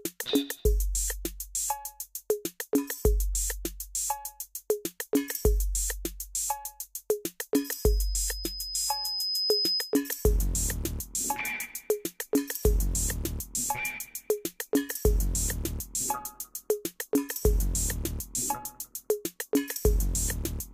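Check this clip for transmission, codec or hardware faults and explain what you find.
There is one fault, a loudspeaker feedback squeal, from 7.56 s to 10.03 s. A microphone is picking up a loudspeaker it drives, and at 5 kHz the loop gain around that path rises above unity, so the tone regenerates on each pass. It swells over about two seconds into a steady, piercing whistle that reaches roughly the level of the surrounding sound, then stops at 10.03 s.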